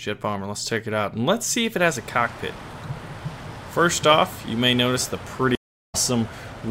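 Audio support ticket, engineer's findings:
Stream reconnect at 5.55–5.95 s: audio drops to silence for about 0.33 s, then resumes roughly 0.4 s further on, material skipped. Connection loss in network/player path; fresh decoder started mid-stream, first frames come back muted or faded in.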